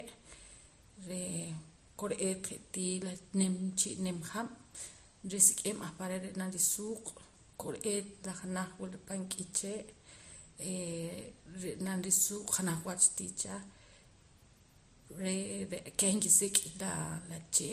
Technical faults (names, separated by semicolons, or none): transcoding between lossy codecs